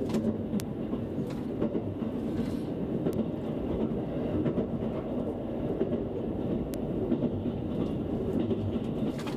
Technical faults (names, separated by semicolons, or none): bit error spike